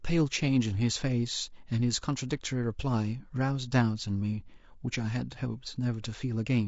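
Speech with plainly audible low-delay AAC compression throughout, rough and grainy, likely AAC-ELD at around 32 kbps; a spectrogram shows noise-filled gaps between the harmonics and a thin, patchy top band.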